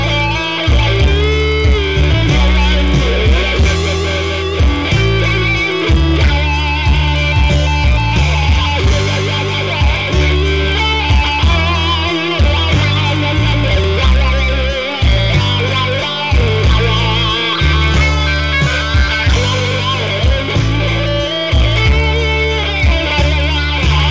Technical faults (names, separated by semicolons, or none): resampler restarted on every block